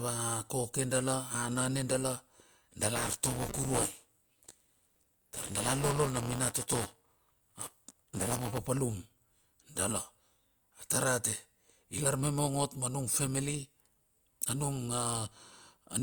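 From 2.95 s to 8.58 s the speech carries buffer tearing, a steady robotic buzz at 200 Hz, which points to a period of about 5 ms. Writer and reader have slipped, so a small slice of each buffer replays audio from one lap earlier. Unlike underrun dropouts, nothing goes silent. The rattle rides only on sound.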